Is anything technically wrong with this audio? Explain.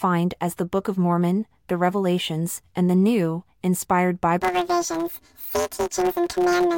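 Yes. From about 4.42 s right through to the end at 6.78 s, the speech turns into a robotic buzz, and the pattern points to planar audio read as interleaved. Each short block, which fits 256 samples or roughly 5.8 ms, carries all its left samples then all its right, but gets read as alternating pairs. So each block plays twice at double speed, left then right. With blocks this short you hear a buzz at about 172 Hz rather than an octave jump.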